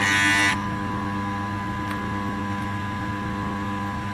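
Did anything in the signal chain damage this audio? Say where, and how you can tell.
Yes. At playback the audio runs at the wrong sample rate throughout, which fits a 16 kHz recording played at 32 kHz with no conversion. Everything moves at double speed and sits a full octave, 12 semitones, higher, because speed and pitch shifted together.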